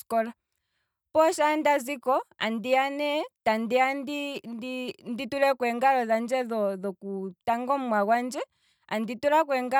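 Nothing here needs fixing: it's a speech recording with no technical faults to point to anywhere along its run.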